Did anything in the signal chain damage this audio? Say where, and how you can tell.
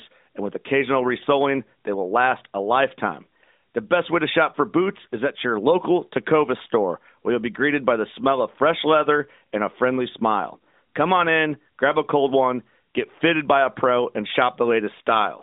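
No, I hear no damage anywhere in this chain.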